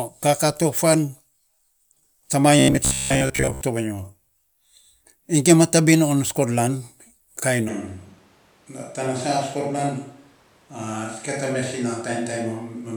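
Speech recording with two faults. From 2.59 to 3.61 s it takes on a robotic sound, a rigid 66.7 Hz buzz, likely from repeated short buffers of about 15 ms replacing most of the real audio. At 7.70 s there is an abrupt switch to a distant microphone, likely: through to the end the sound turns hollow and roomy, about 5 dB quieter, with room noise roughly 30 dB below the speech.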